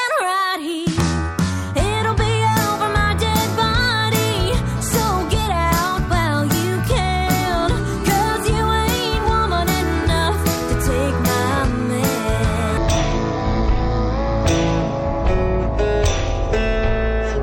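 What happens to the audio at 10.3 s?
Nothing goes wrong at 10.3 s; the audio plays through that moment intact, with no dropout, click or distortion.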